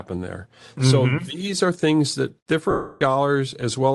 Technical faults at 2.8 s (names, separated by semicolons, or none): Bluetooth LC3 compression; lost LE Audio frames